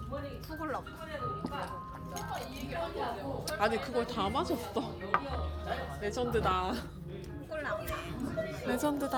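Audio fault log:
No technical faults can be heard anywhere in this recording of sounds, and its signal stays intact and continuous throughout.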